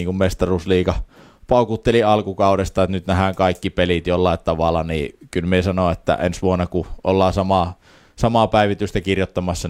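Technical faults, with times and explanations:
No technical faults are present in this speech clip.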